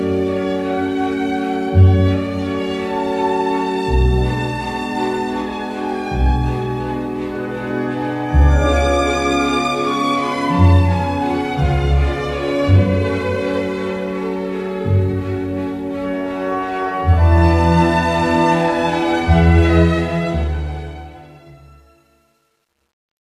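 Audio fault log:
19.77–23.34 s truncation distortion on a fade: the fade-out loses resolution without dither, consistent with 11-bit steps, so the tail turns gritty, worst 20.98–23.35 s. The waveform shows a square staircase, and the spectrogram shows broadband speckle.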